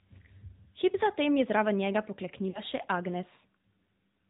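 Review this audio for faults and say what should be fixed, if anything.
The AMR narrowband mobile codec affects the whole clip. Nothing above 4 kHz passes, so the speech sounds thin and boxed in. The voice is plainly buzzy and synthetic, which fits a rate near 10 kbps. A wideband codec or a higher bitrate would prevent this.

Lost AMR speech frames occur from 2.50 to 2.61 s. The decoder covers about 40 ms of missing audio by repeating the last good pitch and vocal tract settings at falling gain. The speech briefly smears and dips, which fits two lost frames. Stronger radio coverage or better error protection would prevent this.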